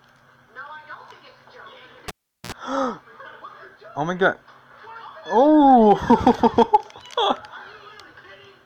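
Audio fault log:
2.08–2.52 s: cable pulled and plugged in. A pop cuts the sound, then near silence lasts about 0.39 s. As the plug goes back, a 60 Hz mains buzz of about 58 ms sounds while only the tip touches. A second pop brings the sound back.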